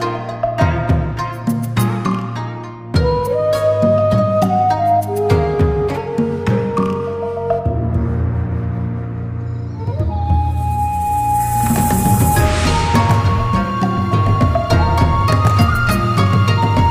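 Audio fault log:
No fault found.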